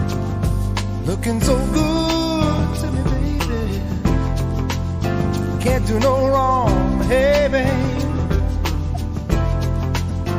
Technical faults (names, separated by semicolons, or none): corrupt frame decoded